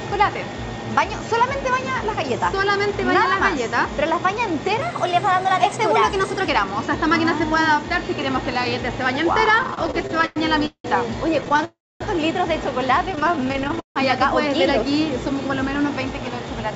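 From 4.82 to 6.49 s a section at the wrong speed runs 1.12 times too fast, raising pitch by roughly two semitones, so the sound turns brighter and hurried. Speed and pitch shift together, which points to a likely clock mismatch during playback or editing.

Repeated stalls (stutter) start at 9.63 s and last until 10.87 s. There are 13 breaks, the longest 185 ms, and about 35% of that span is concealed repetition. The jitter buffer kept running dry, and the receiver extended the last sound each time, so the audio drags rather than losing material. A shorter burst follows at 11.41 to 11.65 s with six brief breaks of no more than 13 ms.

A call audio freeze runs from 11.65 to 12.03 s. The held sound fades into about 250 ms of silence, and then the audio resumes where it stopped. This is likely because packets were held up on the way, and it pushes everything after it 358 ms later.

Stutter returns from 13.12 to 13.99 s with 18 breaks, the longest 159 ms, and about 38% of the span concealed.

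From 15.56 to 16.71 s a jitter buffer speed-up plays at 107% of normal speed with pitch unchanged. Around a tenth of a second of excess buffered audio is trimmed away in small pitch-period slices, so the end sounds slightly rushed. Throughout the clip, nothing is present above 8 kHz, consistent with a wideband call codec.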